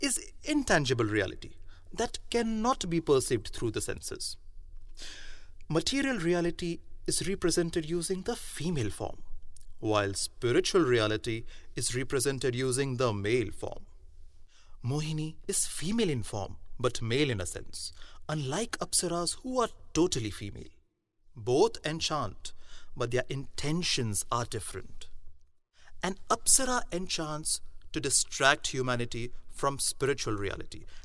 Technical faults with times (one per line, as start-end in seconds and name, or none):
none